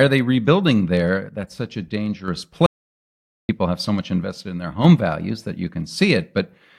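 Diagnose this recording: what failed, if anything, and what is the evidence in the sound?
One channel drops out from 1.29 to 2.28 s and again from 4.24 to 4.85 s. The speech level falls abruptly by about 6 dB, then snaps back. The mono sum has lost half its input, likely a stereo leg failing in the analogue wiring or connector.

An audio dropout to silence runs from 2.66 to 3.49 s. The speech cuts off mid-flow, leaving about 0.83 s of silence with no room tone. The input was likely lost at the converter or driver stage while the recorder kept writing silence.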